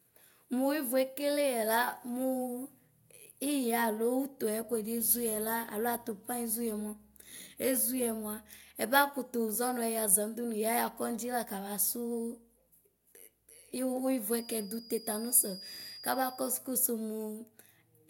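It's a speech recording, and the thing to flag is a feedback whistle running from about 14.27 s to 16.62 s: a thin, steady tone at 4.9 kHz sitting roughly 20 dB under the speech and wobbling a bit in level. It never builds into a full howl, so the likely cause is the speaker-to-mic loop hovering right at the edge of feedback, with just that one frequency sustaining itself before it dies away.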